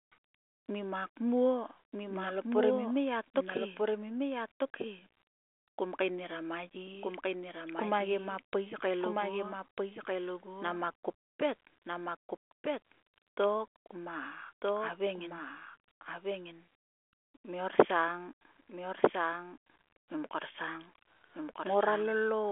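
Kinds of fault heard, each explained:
Doubled audio track: The speech plays twice throughout. A second full-band copy trails about one and a half seconds behind, roughly 5 dB quieter. It carries no decay or room colour. The likely cause is a slower second capture path mixed back in.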